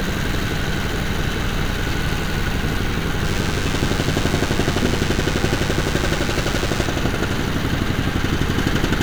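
From 3.24 s to 6.86 s a DECT cordless phone buzz sits under the sound. A nearby DECT handset or base transmits a brief radio burst every 10 ms, and the audio circuitry rectifies it into a 100 Hz pulse train. It is a thin, steady, rasping buzz, roughly 15 dB below the sound. On a spectrogram it appears as a comb of evenly spaced lines at 100 Hz and its many harmonics. The waveform shows sharp, regular spikes 10 ms apart.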